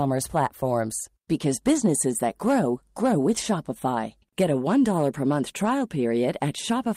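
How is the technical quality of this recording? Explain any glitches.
Three brief runs of lost packets rebuilt from error correction mar this speech, at 1.73 to 1.79 s, 3.37 to 3.43 s and 5.61 to 5.67 s. Each time the decoder played low-bitrate backup copies from the following packets, which fits two lost packets. There's no gap, just about 40 ms of rougher, noisier sound.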